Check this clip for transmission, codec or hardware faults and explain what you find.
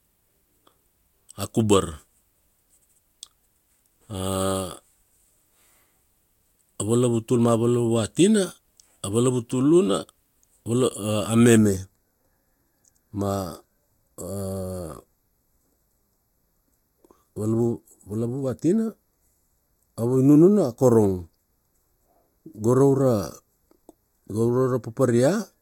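One fault is present. From 11.57 s to the end, channel delay (comb filtering): one channel lags about 0.15 ms before the mono sum, cutting evenly spaced notches from around 3 kHz. The speech turns hollow and phasey, unlike a low-pass filter's single cut-off.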